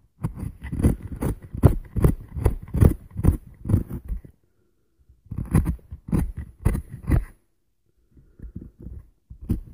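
Nothing here calls for comment, since no technical faults turn up anywhere in the audio.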